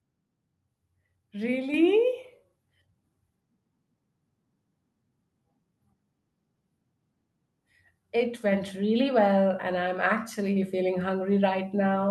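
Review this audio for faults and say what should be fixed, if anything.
The speech and the background noise behind it get abruptly louder together, three times. The level rises by about 4 dB at 1.74 s, by about 3 dB at 8.52 s just before "really well and I'm", and by about 3 dB again at 10.56 s just after that phrase. This is the microphone volume being stepped up: the call software judged the input too quiet and raised the device's input volume in one step, so everything the microphone picks up rises at once. Turning off automatic microphone gain adjustment in the call client and setting a fixed, adequate input level beforehand would prevent it.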